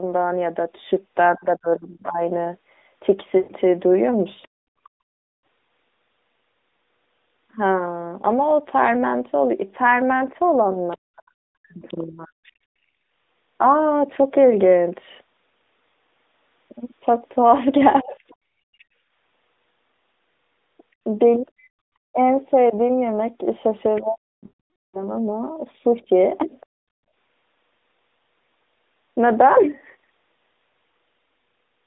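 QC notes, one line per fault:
1.3–4.61 s, 10.75–12.45 s, 18.01–26.07 s, speech suppressed in double talk: the talker's level dips by as much as about 40 dB, in pieces totalling roughly a second, then a second and a half twice. This is likely the echo canceller turning down both sides while the far end talks.
3.38–3.52 s and 24.46–25.11 s, lost AMR speech frames: gaps of 120 ms and 480 ms, fitting runs of about six and twenty-four 20 ms frames. The narrowband decoder repeats the last pitch and vocal-tract settings at falling gain, so sound smears, then fades to silence.
4.42–4.48 s, 10.91–11.94 s, 18.79–26.66 s, other side's voice leaking through: a faint second voice sits about 35, 30, then 25 dB below the talker, growing more noticeable each time. This is likely loudspeaker echo that the canceller did not fully remove from the microphone.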